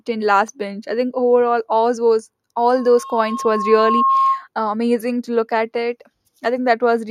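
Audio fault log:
2.74–4.47 s, loudspeaker feedback squeal: right after "think overall all those", a single tone at 1.1 kHz swells over roughly a second and a half to about the level of the speech, then stops. The microphone is re-capturing its own loudspeaker, and at that frequency the loop gain exceeds one, so the tone feeds itself.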